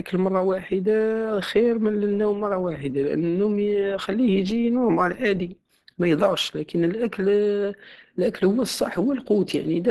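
From start to finish, the speech carries plainly audible Opus compression damage. Nothing reaches above about 12.1 kHz, so the top end is cut off. The sound is muffled and hoarse, with a grainy, rough texture on the voice. The likely cause is Opus running short of bits. The coder has fallen back to its hybrid speech mode, which fits a low bitrate around 16 kbps. Fine detail is lost, and noise fills what remains.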